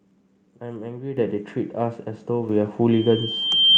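At 1.17 s the microphone volume is stepped up by 9 dB, and at 2.49 s by another 5 dB. Each step is an automatic input-gain increase applied all at once, so speech and background noise jump louder together. From 2.91 s to the end of the clip a loudspeaker feedback squeal develops. The microphone is picking up the speaker it feeds, and the loop gain exceeds one at 3.1 kHz. That tone swells over about a second until it sits a few decibels above the speech.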